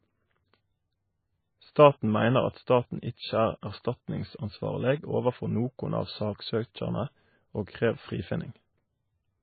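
From start to finish the speech is capped near 4.5 kHz and has a watery, swirling quality, likely MP3 compression at a very low bitrate around 17 kbps. A spectrogram shows a flat ceiling at 4.5 kHz, with gaps flickering between frames below it.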